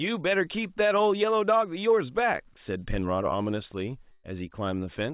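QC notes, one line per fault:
4.12 to 4.26 s, burst of packet loss: the sound smears into a held, fading sound for about 120 ms with no true silence, then jumps ahead, so roughly 120 ms of the original speech never arrives. Several consecutive packets were lost or arrived too late, and the receiver filled the gap by stretching the last received sound while lowering its level. The filled stretch stays inside the 4 kHz band of the narrowband call path.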